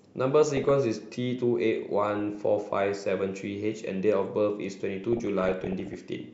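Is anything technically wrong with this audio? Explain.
Yes, there's DAB burbling on this speech clip, at 0.56–0.71 s, 2.19–2.35 s, and a longer stretch at 5.04–5.94 s. Weak reception lets bit errors slip past error correction into the MP2 data, so short noise blips appear in individual sub-bands, giving a few watery blips in the two short patches and a bubbly, squelchy chirping over the voice in the longer one.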